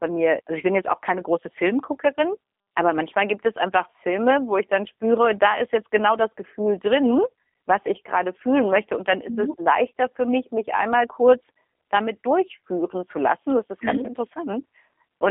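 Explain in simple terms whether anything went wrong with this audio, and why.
The G.729 codec was applied from start to finish. It squeezes speech into tiny packets and rebuilds it from a rough model of the voice, so it sounds plainly rough and slightly synthetic, and everything above about 3.7 kHz is gone, leaving a thin phone-line tone.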